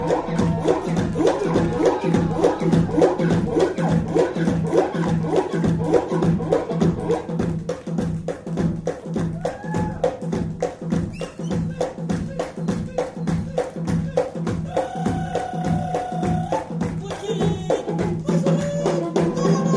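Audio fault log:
No faults found in this audio.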